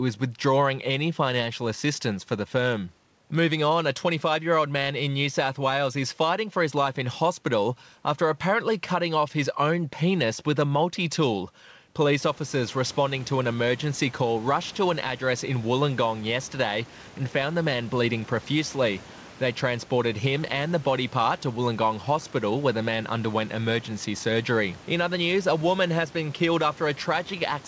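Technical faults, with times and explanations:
No technical faults can be heard in this speech recording. The room's background noise steps up by about 18 dB around 12 s yet stays about 24 dB below the speech, and the call path's codec passes nothing above 8 kHz, which fits wideband G.722.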